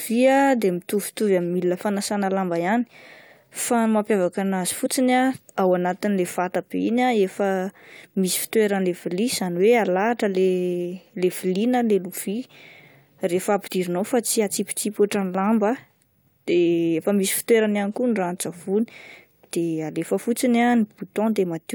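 Speech with compressed frames skipped at 4.85 s, 8.80 s and 13.66–13.68 s, each dropping around 20 ms of audio, which fits one lost codec frame of about 21 ms. Unlike a dropout, no silent gap appears: the audio simply jumps ahead at each join.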